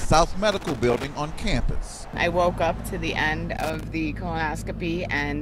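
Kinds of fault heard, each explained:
Loose connector crackle, from 0.52 to 1.07 s and again from 3.57 to 3.83 s: a worn or dirty contact somewhere in the cable path is moving and intermittently losing its connection, so the sound is chopped on and off many times in quick succession. In this clip it shows as two uneven bursts of scratchy crackle, the first about half a second long, the second a quarter of a second.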